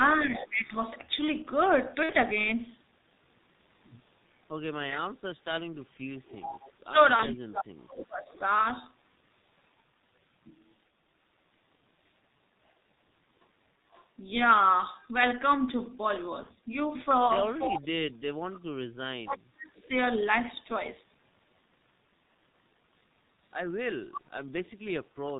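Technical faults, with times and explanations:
throughout: G.723.1 codec. The sound is band-limited, with nothing above 4 kHz, and has the muffled, hoarse quality of a 6.3 kbit/s low-rate speech coder under heavy strain. Consonants smear because the coder works in 30 ms frames and updates its model of the voice slowly, so fast changes in the sound are averaged away. Sibilants and plosives lose their edges, and the overall timbre sounds rough and boxy.
0.24–0.72 s, 6.82–8.44 s, 17.66–19.82 s: speech suppressed in double talk. The level of the main talker dips sharply during these spans: by about 15 dB in the first span, and by about 30 dB and about 40 dB in the later two, where it nearly vanishes. The first span affects roughly 0.4 s of sound, and each later one around 1.5 s. This is likely an echo canceller that heard both sides at once, could not separate the near talker from the returning loudspeaker signal, and attenuated everything.
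0.31–0.65 s, 4.89–8.39 s, 13.91–14.05 s, 19.83–19.88 s, 24.13–24.69 s: echo leak. A faint copy of the sound trails the original by 362 ms. In the first, second and last spans it sits about 15 dB below the direct sound. In the brief spans at 13.91 s and 19.83 s it sits about 35 dB below. The likely cause is a loudspeaker on one side whose echo canceller let part of the microphone pickup through, so the returned signal arrives delayed.
2.03–2.12 s, 7.16–7.26 s, 16.43–16.51 s: VoIP packet loss concealed by the speech codec. About 60 ms of audio is missing at 2.03 s, and about 30 ms at each of the later two points. That pattern fits two lost 30 ms frames and then single lost frames. The decoder fills each gap by repeating its last pitch and filter at falling gain, which produces a short stretched sound that fades. Because each frame builds on the previous one, the sound stays weak or distorted for a moment after the gap.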